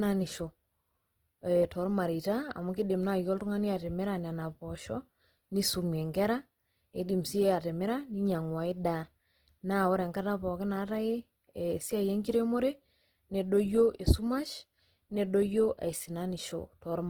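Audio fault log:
throughout Opus compression: speech sounds plainly grainy and rough, likely Opus music-mode coding at around 16 kbps filling starved bands with noise instead of leaving gaps.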